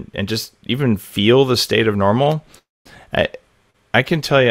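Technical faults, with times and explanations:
2.23–2.28 s, short stall from a late packet: the last sound is held about 28 ms while the jitter buffer waits, then resumes unbroken, with nothing lost.
2.58–2.87 s, call audio freeze: the sound stretches into a fading buzz or hiss, then about 220 ms of silence. This is likely packets held up in transit. The audio picks up where it stopped, with 271 ms inserted rather than dropped.
3.70–3.76 s, short stall from a late packet: a 39 ms hold of the last sound, too brief to fade to silence, unlike the freeze.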